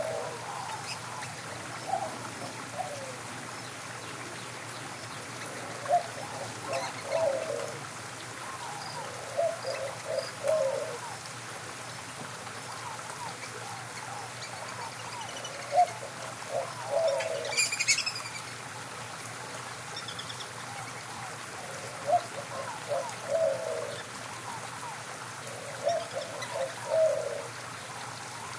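No technical faults can be heard anywhere in this recording.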